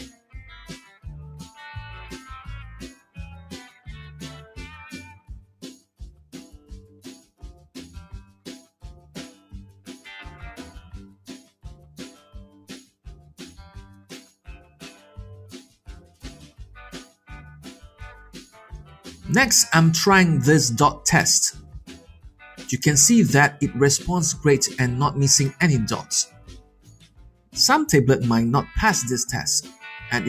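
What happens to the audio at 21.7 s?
At 21.7 s the audio falls inside a stretch from 21.59 to 22.42 s where the sound is cut by the noise suppressor. The suppressor misreads the steady or fading part of the sound as background noise and pulls it down, by about 13 dB at the deepest point, for roughly 0.7 s in total. The sustained body and tail sink or are clipped short, while any sharp onset still comes through. That separates it from a dropout or a mute, which would take everything out evenly, transients included.

This dip sits on top of a wider problem: a noise suppressor built for speech has been applied to this music or sound throughout the clip. Held tones, ambience and reverb are constantly mistaken for noise, so the gain swings by roughly 15 dB, giving a pumping, fluttering, thinned character. A plain level drop or fade would change loudness smoothly, without favouring attacks over sustain.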